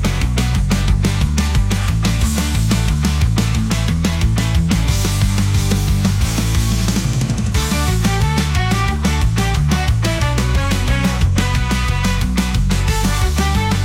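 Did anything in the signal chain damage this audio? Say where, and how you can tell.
No, nothing in the signal chain audibly damaged it.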